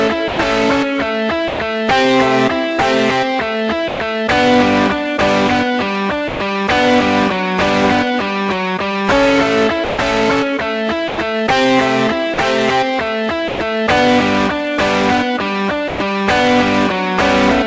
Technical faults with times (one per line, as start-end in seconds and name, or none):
0.28-1.60 sound chopped by the voice detector
3.88-4.00 sound dropped by the voice detector
6.28-6.40 sound dropped by the voice detector
9.84-13.60 sound chopped by the voice detector
15.88-16.00 sound dropped by the voice detector